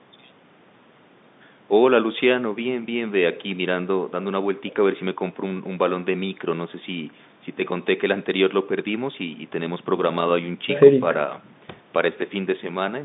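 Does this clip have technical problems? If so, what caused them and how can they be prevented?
No, nothing in this speech stood out as a technical problem on listening, so there is nothing here that needs preventing.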